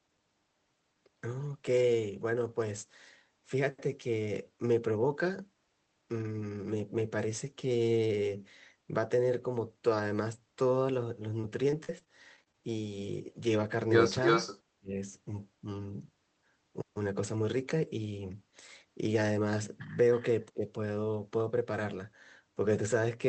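From 11.41 to 12.55 s the speech turns choppy and robotic, with eight short holes, the longest 43 ms, patched by stretching the preceding sound. This is repeated packet loss, with about 160 ms of audio missing across the stretch.

At 14.24 to 14.60 s a second copy of the speech trails about 318 ms behind, roughly as loud as the original. This is likely an echo leak, with loudspeaker sound getting past the far side's echo canceller.

Right after, from 14.76 to 15.01 s, the speech sinks by around 30 dB and breaks up. This is likely speech suppressed in double talk, with the canceller turning down the talker along with the echo.

At 20.14 to 20.22 s a faint echo reappears, far below the speech and again about 318 ms late. This is likely another echo leak.

At 20.53 to 20.65 s a shallower dip of around 15 dB is likely the same double-talk suppression.

Throughout, the Opus call path limits the audio to 8 kHz.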